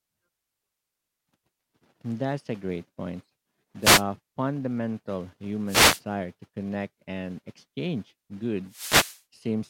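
Three wireless microphone noise hits: 3.81 to 4.04 s right after "a great point", 5.66 to 6.01 s just before "to connect and exchange", and 8.67 to 9.23 s after that same phrase. Each time the FM radio link fades as reflections cancel, so receiver noise swells into a quick swish of static.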